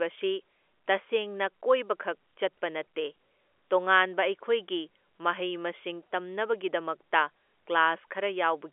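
There are no technical faults to describe at any point in this speech, which comes through a G.711 A-law telephone line limited to roughly 300 Hz to 3.4 kHz.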